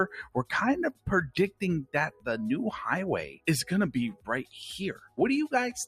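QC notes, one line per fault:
Throughout: noise suppressor applied to music or sounds. A speech-tuned suppressor stays active, treating steady and decaying content as noise and swinging gain by about 15 dB. Attacks pass while sustains sink, giving a pumping, thinned sound. The waveform envelope bobs irregularly, and the spectrogram shows sustained bands fading and returning.
0.92–1.08, 2.11–2.27, 3.29–3.47, 4.13–4.55, 4.94–5.19 s: sound cut by the noise suppressor. At each point the suppressor mistakes held or fading sound for noise and pulls it down by about 15 to 20 dB, deepest near 0.92 and 3.29 s, so tails vanish early. The waveform shows sudden notches, and the spectrogram shows darkened gaps after onsets.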